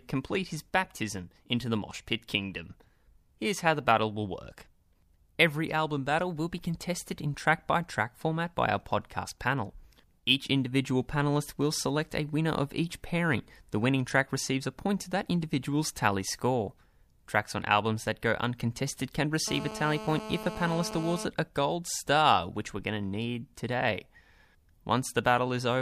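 From 19.48 to 21.25 s the speech picks up GSM phone buzz: a raspy 217 Hz burst pattern, about 10 dB under the signal, steady like an active call.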